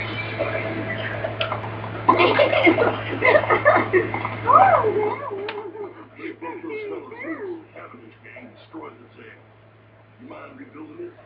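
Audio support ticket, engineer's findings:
Nothing stood out on listening; the level rides smoothly and the top end stops around 8 kHz, as expected from call microphone processing.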